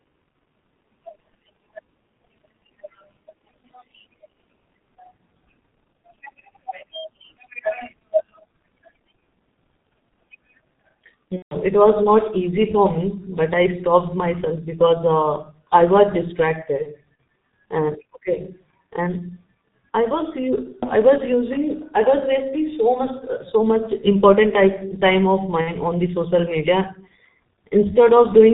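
From start to finish the speech carries heavy G.723.1 codec damage. Nothing comes through above 4 kHz, so the sound is muffled, and the slow-updating vocal model with 30 ms frames leaves it hoarse, with smeared consonants. The coarseness fits the 6.3 kbit/s mode.

VoIP packet loss concealed by the speech codec cuts in three times. At 11.36 to 11.56 s the speech stretches into a fading tone or noise and then mutes, about 150 ms in all, which points to five consecutive lost frames. At 16.82 to 16.95 s two short dropouts, each about one frame long, cause brief concealed stretches. At 25.61 to 25.72 s about 60 ms is concealed. Each time, the decoder repeats its last pitch and filter at falling gain, and the speech stays weak for a moment after packets resume.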